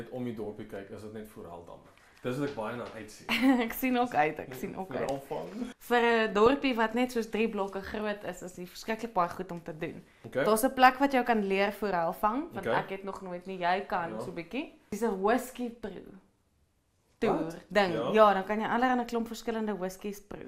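From 6.46 to 6.61 s, a short patch of burbling noise blips breaks through the sound. This is DAB burbling. Weak reception let a small share of bit errors, around 0.2 percent, slip past error correction. Corrupted MP2 samples put short blips of noise into single sub-bands across 8 frames, and any corrupted scale factors that got through would make a sub-band jump in level for up to a frame.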